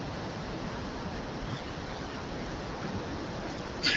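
Speech carried over AMR wideband (HD Voice) coding, clear at a rate that fits 12.65 kbit/s, shows AMR bit errors from 1.53 to 2.20 s and again from 3.44 to 3.80 s. At an error rate of roughly 15 percent in the weakly protected frame bits, excitation pulses and fine pitch, gain and spectral parameters decode wrongly, so the voice holds its pitch and level but turns hoarse, scratchy and gargly.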